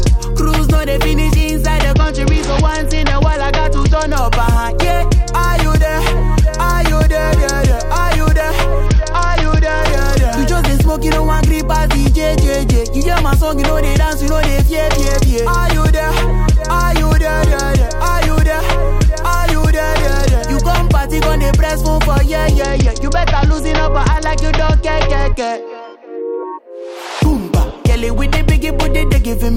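Congestion on the Bluetooth link forced a Bluetooth SBC bit pool drop from 1.94 to 4.16 s, 8.86 to 9.82 s and 22.62 to 26.52 s. The sound points to the bit pool falling to around 9, near 78 kbps. Starved upper sub-bands dull the treble while coarse quantisation adds grit.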